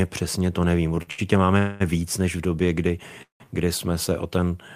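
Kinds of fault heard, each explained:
Short stall from a late packet: Twice in quick succession the speech catches and hangs for a moment, a sound held slightly too long with a slight buzz or dip, at 1.03 to 1.09 s (about 47 ms of stretch) and 1.11 to 1.20 s (about 70 ms). A packet arrived late, the jitter buffer emptied, and the receiver drew out the last sound until it came, then resumed from the same point, with nothing lost.
Call audio freeze: The speech stops dead and is replaced by a held, fading buzz or hiss before carrying on exactly where it left off. At 1.58 to 1.82 s the fill lasts about 219 ms and never goes silent. At 3.22 to 3.46 s about 178 ms is filled, 120 ms of it dropping to silence. The likely cause is packets delayed in transit draining the jitter buffer, which inserts a gap while losing no speech.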